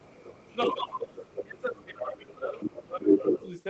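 A second voice runs through this speech clip in scraps: from the start to 0.74 s and again at 1.17 to 1.44 s it sits roughly 10 dB below the talker, at 1.76 to 1.86 s it is a faint trace some 25 dB down, at 2.6 to 2.83 s it comes within about 5 dB, and at 3.01 to 3.48 s it is louder than the talker by about 5 dB. This is the other side's voice leaking through, most likely because the far end plays on a loudspeaker and the echo canceller fails to subtract all of it from the microphone signal. Between 0.7 and 3.34 s the talker's own voice keeps dipping and breaking up, losing around 20 dB at its lowest and for roughly two seconds in total. This is speech suppressed in double talk: most likely, with both sides speaking at once, the canceller cannot separate the talker from the returning echo, so it attenuates both together.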